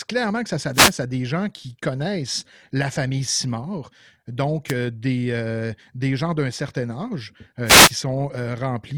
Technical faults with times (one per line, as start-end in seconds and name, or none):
0.73-0.93 wireless microphone noise hit
4.67-4.73 wireless microphone noise hit
7.64-7.93 wireless microphone noise hit